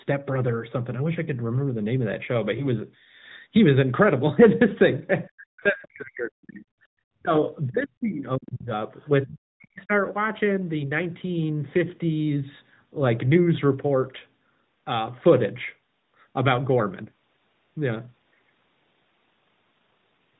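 It's a speech clip carried over what sounds like AMR narrowband, the 2G/3G mobile codec, with everything above 4 kHz gone, and it has two problems. First, there are lost AMR speech frames around 2.58 to 2.66 s. It sounds like a single 20 ms frame failed, and the decoder covered the hole by replaying its last good pitch and vocal-tract settings at reduced gain. You hear it as a quick dip or warble before the voice settles back. Second, the talker repeatedly gets ducked hard, by something like 40 dB at the deepest, from 5.27 to 6.64 s, 7.13 to 7.34 s, 7.69 to 8.72 s and 9.25 to 9.92 s. The voice is pulled down in these stretches, which points to speech suppressed in double talk as the likely cause. Both ends were talking at once, and the echo canceller couldn't tell this talker apart from the far-end echo, so it pulled everything down.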